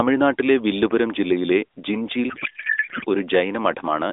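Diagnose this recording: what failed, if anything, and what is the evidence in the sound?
Codec payload misread, 2.30 to 3.05 s, at the codec stage: the AMR narrowband speech collapses into garbled noise and warble that barely tracks it. The decoder is parsing frames with fields misplaced, which fits octet-aligned AMR being read as bandwidth-efficient.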